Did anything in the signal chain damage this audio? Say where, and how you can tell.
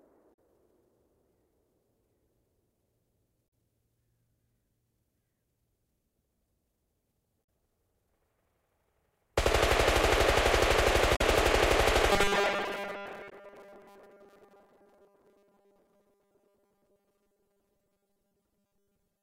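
Yes. Damaged data in a compressed stream at 0.30–0.38, 3.45–3.48, 7.41–7.47, 11.13–11.21 and 13.29–13.33 s: brief disruptions as the decoder loses frame sync.

Robotic sound from repeated short buffers from 12.12 s to the end: a rigid 200 Hz buzz replaces most of the sound, likely a driver repeating 5 ms buffers because audio arrives late.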